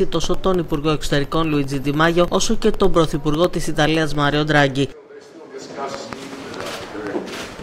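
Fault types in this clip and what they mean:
Periodic USB or driver dropouts: A background task stalls the USB bus or audio driver every 0.1 s from 0.14 to 4.35 s. Each stall drops about half a millisecond of audio, replaced by silence. Some forty evenly spaced tiny gaps produce a regular ticking.
Train of clicks: From 5.94 to 7.08 s, roughly four similar pulses sit over the sound at an uneven pace, about 2.7 per second. They stand about 10 dB above the signal. The likely cause is nearby interference or a faulty connection or supply.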